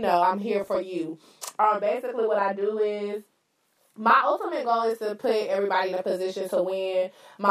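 From the start and throughout, a channel delay (doubling) is present. One channel arrives 40 ms late and is summed to mono, so an equal-level copy trails every syllable as a slapback. From 0.64 to 0.76 s, just after "know I'm here", there is a burst of DAB burbling. Bit errors from weak reception, a small fraction of a percent, slipped past error correction and put short blips of noise into single sub-bands. The result is spread over what sounds like about ten corrupted frames.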